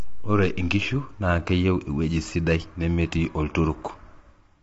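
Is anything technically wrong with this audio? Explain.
Yes. Throughout the speech the voice sounds rough and grainy, with noise filling the gaps between harmonics and nothing above 7.7 kHz. The likely cause is low-delay AAC compression, whose short frames resolve pitch poorly. The damage fits a low bitrate near 24 kbps.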